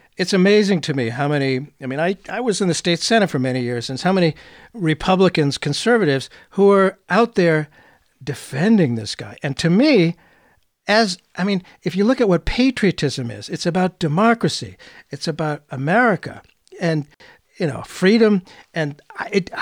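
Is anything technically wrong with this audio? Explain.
Yes, there is an intermittent contact fault from 17.13 to 17.20 s, just before "you know freedom". A loose cable or plug briefly loses connection for about 55 ms, so the speech cuts out abruptly, with crackle as the contact breaks and remakes.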